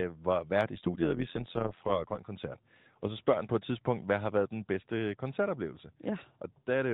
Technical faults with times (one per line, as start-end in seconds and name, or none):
0.75-2.21 overlap-add ripple